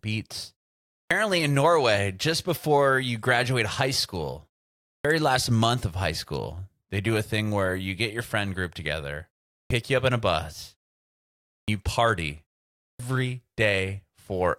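At 0.95, 4.88, 9.54, 11.51 and 12.84 s, clipped start after a pause: the output wakes late after 0.3 to 0.8 s silences, swallowing about 150 to 170 ms of each onset.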